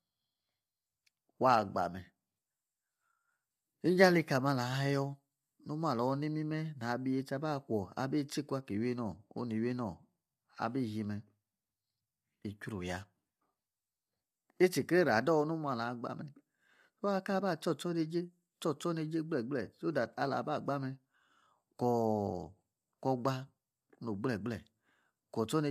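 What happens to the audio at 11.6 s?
At 11.6 s, as throughout, the speech sounds rough and grainy with noise between harmonics, likely low-delay AAC compression at around 32 kbps, steady rather than dropout-like.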